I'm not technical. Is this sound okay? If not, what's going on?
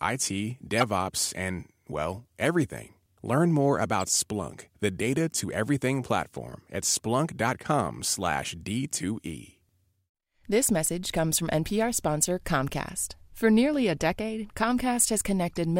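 No. Corrupt frame decoded: damaged chunks of compressed data were played anyway, causing brief chirps or noise bursts at 0.77–0.83 s, 4.00–4.04 s and 15.56 s.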